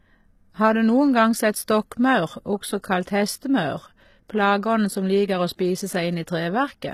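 Speech, carrying plainly audible HE-AAC compression damage for the whole clip. Nothing is present above 14.9 kHz, and the treble below that edge sounds rebuilt rather than captured. Its harmonics don't line up with the lower band, so s sounds come out gritty and lispy with a metallic sheen. The likely cause is spectral band replication: the codec transmits only the lower spectrum and synthesizes the top by copying bands upward under a coarse envelope. The damage level fits a very low bitrate, around 20 kbps, in HE-AAC v2.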